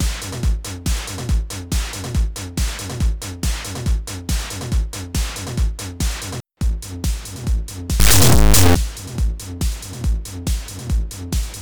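From 8.00 to 8.75 s, integer read as float: integer samples, likely 32-bit, are interpreted as floats, swinging output between silence and clipping into a harsh, extremely loud buzzing square wave.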